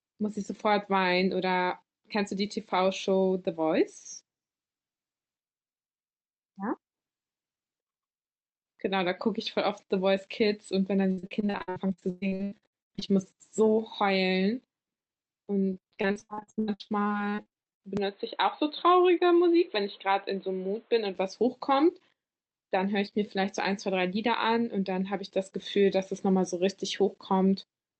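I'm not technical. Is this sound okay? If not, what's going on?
No. There are two kinds of problems.

From 11.11 to 13.09 s and again from 15.73 to 17.84 s, you hear repeated packet loss (robotic sound). Pieces of the speech failed to arrive, one after another, and the system covered each hole by stretching the sound that came just before it. This happens in rapid bursts, with dozens of short gaps, the longest about 118 ms in the first stretch and 83 ms in the second. Nearly half of each stretch is this patched-in filler, which makes it choppy and machine-like.

From 17.97 to 21.15 s, the speech turns dull and muffled, with nothing above about 4.2 kHz and a faint new background noise. The loudness stays the same, and there is no silence at the change. The likely cause is an input switched to a poorer device, such as a different microphone or a headset in call mode. That kind of device carries a narrower range of sound and brings its own noise, so the voice loses its crisp upper detail until the stretch ends.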